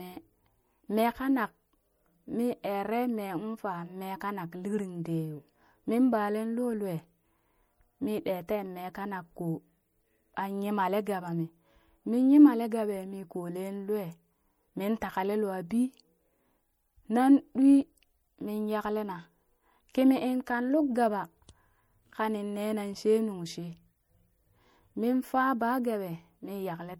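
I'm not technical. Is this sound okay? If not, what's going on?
No, the speech carries plainly audible damage from start to finish, most likely from MP3 compression. The encoder kept too little detail, so quiet parts of the sound flicker in and out, giving a watery, swirly texture, with metallic chirping on s sounds.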